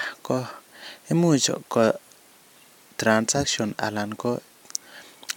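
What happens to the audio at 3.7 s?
Nothing goes wrong at 3.7 s; the speech there is intact, with no dropout, click or distortion.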